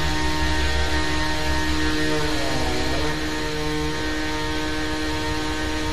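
From the start until 3.12 s, a doubled audio track plays: every sound recurs about one second later at roughly equal level, full-band, likely from a delayed second capture path. Waveform and spectrogram show each event repeated one second apart, the copy ending abruptly at 3.12 s.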